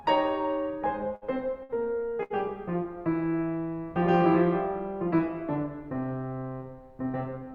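At 1.15 to 1.24 s, 1.63 to 1.72 s and 2.23 to 2.33 s the music suffers a burst of packet loss. Each time the receiver stretches the last sound for 57 to 69 ms, holding and fading it, then picks up about 60 ms further on, so a slice of music is skipped. Unlike a plain dropout, the gap is never silent and the timing jumps forward.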